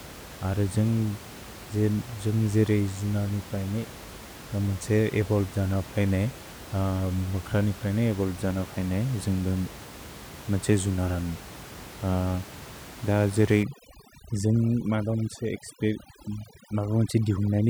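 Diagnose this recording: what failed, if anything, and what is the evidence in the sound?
Overdone noise removal in call processing, 13.63–17.69 s: bands near the noise estimate are cut, leaving a twinkling, broken-up background and speckled, hole-ridden spectrogram patches.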